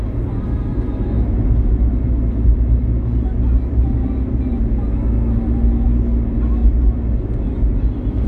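No technical faults are audible anywhere in the sound.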